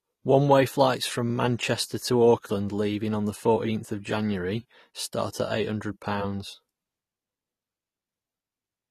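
Throughout, the speech sounds dull and swirly, likely from AAC compression near 32 kbps; a spectrogram shows nothing above a flat 14 kHz ceiling.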